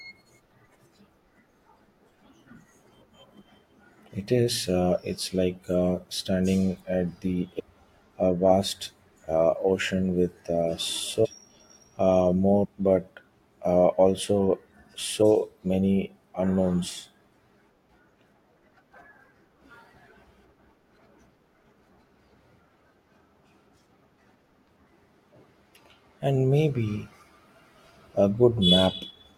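Compressed frames are skipped at 7.58–7.60 s, between "uh standing at the" and "a vast uh"; 11.24–11.26 s, after "with uh"; 12.64–12.66 s, before "but uh also"; 15.21 s; and 22.80 s. Missing or rejected frames drop roughly 700, 500, 100, 100 and 300 ms, so the audio jumps ahead at each join.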